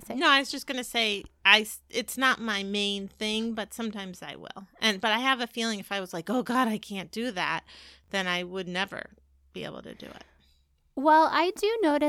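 At 8.04 to 8.08 s the speech has chunks out of order. A 20 ms block reached the output one chunk late, so it plays after the block that should follow it and the two trade places. No audio is lost, but the brief reversal sounds like a garbled flicker. On the waveform, three abrupt discontinuities sit within those 40 ms. The spectrogram shows matching thin vertical lines where the broken formant traces jump.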